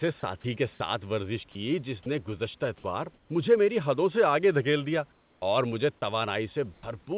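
At 0.20 s, just before "کے ساتھ ورزش", and again at 1.52 s and at 2.03 s before "نے گزشتہ", about 30 ms of speech gives way to steady hiss. These are likely sound dropped by the voice detector. A longer 60 ms gap follows at 2.78 to 2.84 s, between "جس نے گزشتہ" and "مجھے میری حدوں سے". From 3.14 to 3.29 s the room background, about 38 dB below the speech, turns flat and featureless and drops about 2 dB, likely comfort noise in place of the background. The same happens from 5.12 to 5.42 s, where the level drops about 9 dB and the fill is clearly quieter. Inside that span the speech returns abruptly with no soft start, because its first 40 ms, from 5.38 to 5.42 s, were likely lost to an onset clipped by the voice detector. At 6.74 to 6.83 s, another 90 ms of the signal drops out to hiss, again likely the voice detector cutting sound. Throughout, nothing is heard above 4 kHz, which fits the narrowband G.711 call codec.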